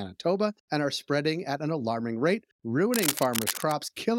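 Just after "at an alarming rate", cable scratch noise rustles from 2.93 to 3.72 s, nearly as loud as the speech. Likely a worn connector.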